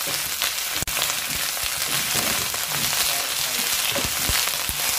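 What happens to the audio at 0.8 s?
At 0.83 s the continuous sound drops into a silence of about 44 ms, ending at 0.88 s. This is a gap at a join of encoded pieces: separately encoded pieces were joined untrimmed, so encoder delay and last-frame padding remain. The edges are smeared by the codec, and the sound resumes where it stopped.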